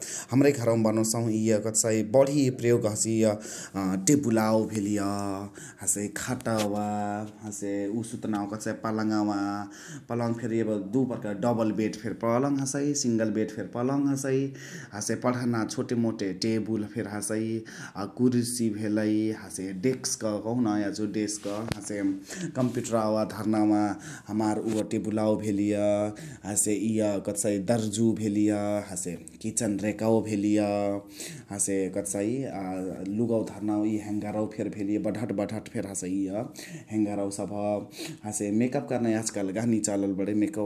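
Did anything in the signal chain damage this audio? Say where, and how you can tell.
No, nothing in the signal chain damaged this audio.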